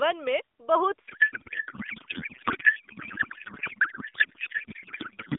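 The first second or so is narrowband phone speech, with energy confined to roughly 300 Hz to 3.6 kHz. At 1.08 s a codec payload misread takes over and lasts to the end. The AMR frames are packed octet-aligned but decoded as bandwidth-efficient, so every field is read from the wrong bits. The speech collapses into garbled, warbling noise that barely tracks it. On a spectrogram, formants and harmonics give way to smeared, shapeless energy. The waveform envelope barely follows the syllables.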